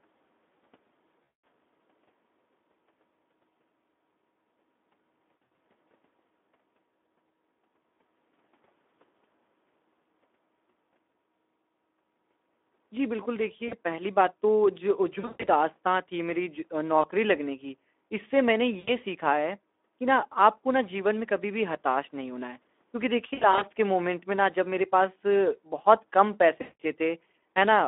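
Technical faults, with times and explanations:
Throughout, Speex codec: the speech is hoarse and noisy, with a grainy edge. The CELP coder has too few bits for the excitation, which fits roughly 11 kbps. A narrow line band from 250 Hz to 3.6 kHz leaves it thin and muffled.
1.23–1.43 s, 5.37–5.57 s, 13.67–13.75 s, 15.19–15.47 s, 17.01–17.08 s, 18.79–18.90 s, 23.33–23.64 s and 26.61–26.81 s, VoIP packet loss concealed by the speech codec: the sound smears into a fading buzz or coloured noise as the decoder extrapolates its last pitch and filter. At 5.37, 15.19 and 23.33 s the dropouts come in broken bursts, and the voice stays weak briefly after each one.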